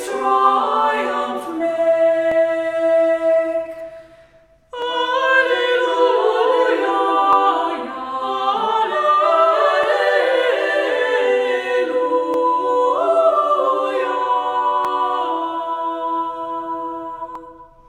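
The audio was handled in chunks that overlap: each block, about 2.5 s long, begins slightly before the previous one finished, so roughly 6.5 ms of sound plays twice at every join. The result is a brief click or tiny stutter at a steady 2.5 s rhythm through the sound, at 2.32, 4.82, 7.33, 9.84, 12.34, 14.85 and 17.35 s.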